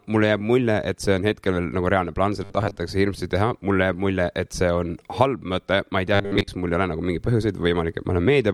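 A speech clip in which incoming audio twice arrives too slowly, and the player likely covers each gap by looping a short buffer of about 10 ms, giving robotic sound from repeated short buffers. From 2.44 to 2.76 s, after "reaalne plaan", roughly half the sound is repeats; from 6.15 to 6.48 s, between "ma ei tea" and "mul ei ole", most of it is. Both stretches become a rigid metallic buzz locked at 100 Hz.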